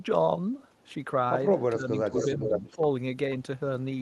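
From 1.74 to 2.19 s the speech dips by about 20 dB, likely speech suppressed in double talk as the echo canceller ducks its own talker along with the echo; the waveform visibly shrinks. From 2.2 to 2.78 s an echo leak returns the voice about 485 ms late at roughly equal level, likely from uncancelled loudspeaker pickup, showing as repeated spectrogram patterns. Shorter suppressions follow at 2.47 to 2.52 s (about 5 dB) and 2.75 to 2.82 s (about 15 dB).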